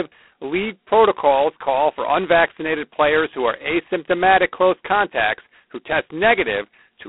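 From start to end, the speech carries G.726 ADPCM damage. The codec sends only a few bits per sample, each coding the gap between the signal and an adaptive prediction. With so few bits, the error stays large. The damage is heavy, which points to the 16 kbit/s mode. A harsh, rasping hiss rides on the speech and rises and falls with its level. The band runs from about 250 Hz to 3.4 kHz, and nothing passes above 3.9 kHz.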